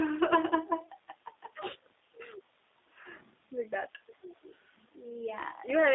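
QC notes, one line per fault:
throughout, G.729 codec: speech is rebuilt from a filter model and sparse pulses, fitting 8 kbit/s, so it sounds plainly rough, synthetic and limited to 300 Hz–3.7 kHz.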